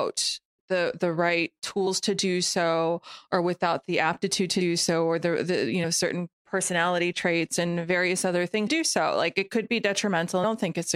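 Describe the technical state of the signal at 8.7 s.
At 8.66 s there are compressed frames skipped. It falls right after "traits and various other", and the audio resumes at "do so like it". Several whole frames of the compressed stream never reach the output. They were either missing or rejected as damaged. About a fifth of a second of speech drops out, consistent with frames of roughly 23 ms.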